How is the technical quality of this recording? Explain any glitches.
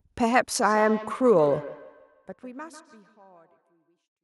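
The recording has a feedback echo between two devices from 0.62 s to 3.98 s. Another device in the room replays this microphone's signal, the microphone captures it again, and neither echo canceller removes the other device's output. Each syllable returns roughly every 150 ms, peaking at about 15 dB below the direct speech, thinner and more ringing with each pass, while the level fades smoothly out from around 1.5 s to the end at 4.23 s.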